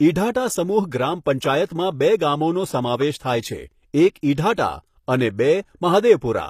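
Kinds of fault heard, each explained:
HE-AAC compression: The treble of this speech is likely rebuilt by spectral band replication rather than coded directly, with the upper bands copied from lower ones and shaped by a coarse envelope. The damage is plainly audible throughout: s sounds come out gritty and lispy, and the brightness does not match the harmonics below the crossover. Nothing is present above 14.9 kHz, and the overall quality points to a low bitrate around 24 kbps.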